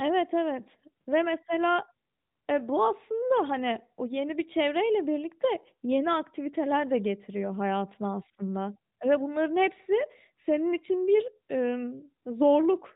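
No technical faults are audible.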